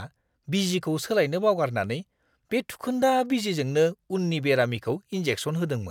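No technical faults can be heard in the recording, from its first moment to its last.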